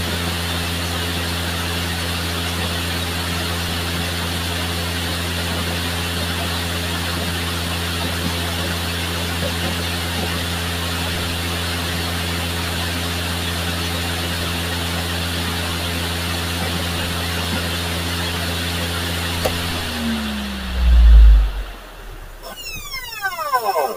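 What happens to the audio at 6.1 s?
Nothing goes wrong at 6.1 s; the sound continues intact through that moment, with no dropout, click, distortion or other fault.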